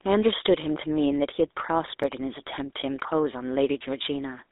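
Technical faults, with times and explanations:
throughout: GSM full-rate codec. The speech has a buzzy, gravelly roughness and a thin, boxed-in tone, with the line band running from about 300 Hz to 3.7 kHz and nothing at all above 3.8 kHz. The codec rebuilds the voice from a vocal-tract filter driven by a coarse, regularly spaced pulse excitation that keeps only a fraction of the original detail, which produces the grainy buzz. The damage is plainly audible and fits 13 kbps full-rate GSM.
2.03 s and 3.00 s: block of digital silence. Each is heard as a tick or dip rather than a gap, because the holes are tiny, about 1.81 ms and 1.45 ms. At each point the signal drops straight to zero and jumps back with no fade, so both edges form a step. The second gap fits a 64-sample block. Output that was not written in time is the likely cause.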